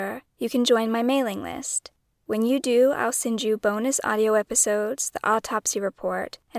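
No technical faults can be heard anywhere in this recording of speech, which carries through without interruption or damage to the signal.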